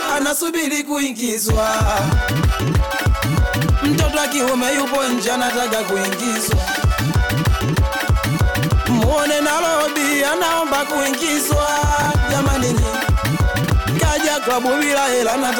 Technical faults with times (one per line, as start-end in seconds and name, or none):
12.02-12.06 chunks out of order
13.64-13.70 chunks out of order